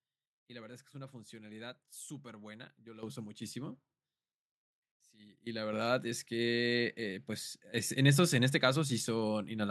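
At 3.03 s and 5.73 s the microphone volume is stepped up, by about 10 dB then about 5 dB. Software raised the input gain. Speech and background jump together.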